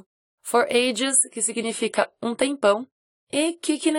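At about 0.99 s this speech clip abruptly loses its top end and stays duller to the end: nothing remains above 11.4 kHz, and coding artefacts thicken, with no gap at the switch. It's an adaptive stream at a lower bitrate, which fits a drop from roughly 96 to 32 kbit/s AAC.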